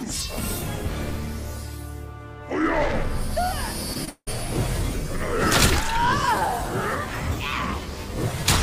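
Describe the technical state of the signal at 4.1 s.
At 4.1 s the signal is inside a gap. Just before it, from 4.05 to 4.09 s, a short concealed packet loss removes about 20 ms. The receiver patches that hole by extending the preceding sound, which gives a brief smear, and then blends onward.

From 4.09 to 4.29 s the audio breaks off for about 0.18 s, likely a long network dropout. The last sound is stretched into a fading buzz or hiss, followed by about 70 ms of silence. Playback resumes with the missing stretch simply absent.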